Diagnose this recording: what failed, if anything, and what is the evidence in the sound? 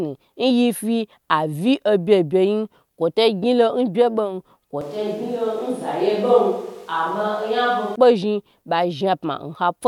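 At 4.81 s the speech turns suddenly roomy and hollow, with less bass. Its level drops about 5 dB. Room noise rises to roughly 30 dB below it. It snaps back at 7.96 s. This is a switch to a distant microphone, at the capture stage, likely because the close microphone dropped out.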